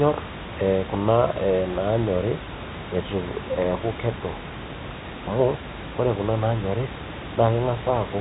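Nothing faulty to report: the room's background noise sits about 11 dB under the speech, and the telephone coding, which fits G.711 A-law at 64 kbps, passes nothing above 3.8 kHz and leaves at most a faint quantisation hiss that tracks the signal level.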